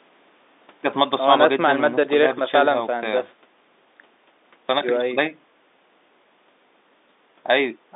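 No faults found: the speech sits in an ordinary telephone band of 250 Hz to 3.7 kHz, with nothing audibly wrong.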